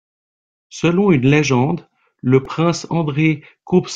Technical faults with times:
2.45 repeated buffer

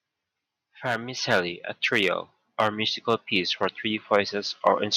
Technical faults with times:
1.17 microphone volume stepped up
1.84-2.13 hard clipping

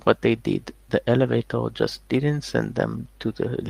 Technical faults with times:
1.23-1.33 lost packet rebuilt from error correction
2.15-2.21 lost packet rebuilt from error correction

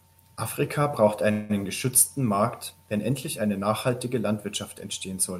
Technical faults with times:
1.31-1.51 call audio freeze

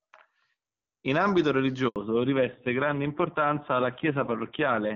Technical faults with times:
1.88-1.96 handover gap
1.96-4.95 fallback to narrowband

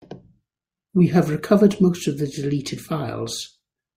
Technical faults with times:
none

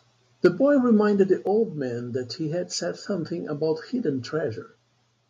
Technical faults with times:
0.44-0.47 microphone overload
0.46 microphone volume stepped down
1.47 microphone volume stepped down

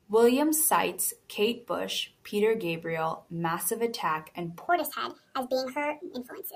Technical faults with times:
4.69-6.55 wrong sample rate

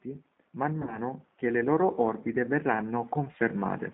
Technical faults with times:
0.00-3.93 G.729 codec
0.05-3.82 automatic gain rising
0.82-0.99 VoIP packet loss concealed by the speech codec

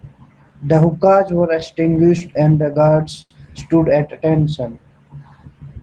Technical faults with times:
1.39-3.32 repeated stalls (stutter)

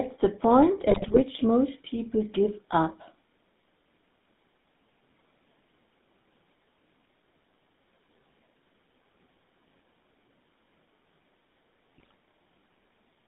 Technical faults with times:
0.00-13.28 GSM full-rate codec
0.90-1.22 GSM bit errors
11.98-12.14 GSM bit errors

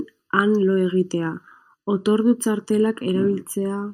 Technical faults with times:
0.00-3.93 channel delay (comb filtering)

